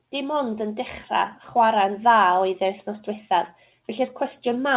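No technical faults can be heard in the speech, which comes through a WebRTC call path working as intended, with nothing above 4 kHz, consistent with a narrowband codec such as G.711 A-law at 64 kbps.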